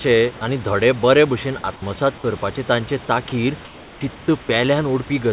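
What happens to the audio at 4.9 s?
Nothing goes wrong at 4.9 s; the speech passes through intact, with no dropout, click or distortion at that moment.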